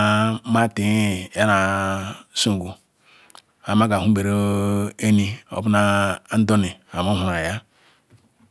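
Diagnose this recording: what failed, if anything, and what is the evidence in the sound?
Nothing failed in this speech recording; no stage of the chain leaves an audible fault. There is no dropout, distortion, noise burst, or timing glitch at any point to offer as evidence.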